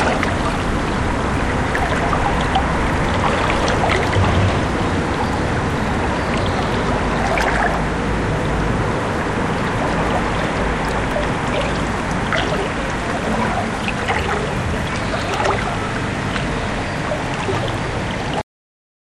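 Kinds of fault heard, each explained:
Clock drift buffer slips: A regular click or pop recurs every 1.46 s through the sound, from about 0.88 s to 18.4 s, roughly fifteen times in all. The steady spacing points to a likely cause in two devices running on separate clocks that disagree by roughly 700 ppm, so the buffer between them slowly drifts until a block of around 50 samples is dropped or repeated, breaking the waveform at each slip.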